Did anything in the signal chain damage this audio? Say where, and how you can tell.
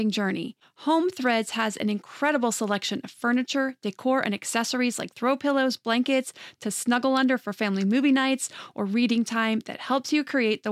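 Yes. Hard clipping hits this speech four times, at 1.26–1.63 s, 2.24–2.30 s just before "selection of furniture decor", 4.26–4.59 s just after it, and 6.93–7.17 s before "under for family movie". Each overload is slight, about 1 dB past full scale, so the loudest syllables crackle rather than fuzz. The likely stage is the converter or a fixed-point format conversion running out of headroom. On the waveform the peaks are sheared flat at the rails. The spectrogram shows brief vertical smears of harmonics reaching high into the kHz range.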